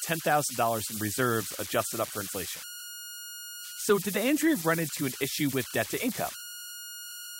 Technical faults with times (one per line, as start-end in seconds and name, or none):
0.00-7.40 converter idle tones